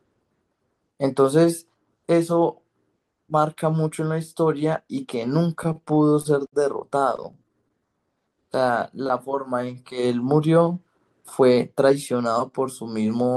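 Speech clip with a run of network-timing trouble in the middle. Repeated stalls (stutter) hit from 5.63 to 6.54 s, eight gaps totalling 151 ms, the longest 60 ms, and again from 6.98 to 7.83 s, ten short gaps of up to 14 ms adding 107 ms. Packets arrived late, the jitter buffer kept running dry, and the receiver stretched the last sound to bridge each hole. Nothing's actually lost, but it drags and hiccups. Right after, from 7.86 to 8.72 s, there's a jitter buffer slow-down: delivery at about 89% speed, with roughly 106 ms added by repeating pitch periods to rebuild the reserve, so sounds draw out at unchanged pitch. Then from 10.87 to 12.21 s a jitter buffer speed-up trims about a tenth of a second, running at 107% to cut the excess delay, which makes that stretch sound a bit rushed.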